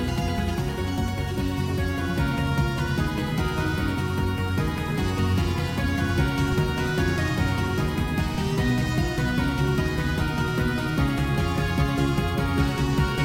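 Three low thumps break into the sound at 6.53 s, 8.35 s and 10.22 s, each a single dull knock that sits under the material without disturbing it. These are DC steps: the waveform's zero line jumps suddenly, by about -22 dBFS at the first two and about -24 dBFS at the third, as when a converter recalibrates or an offset input is switched in. A 20 Hz high-pass in the chain then lets each offset die away.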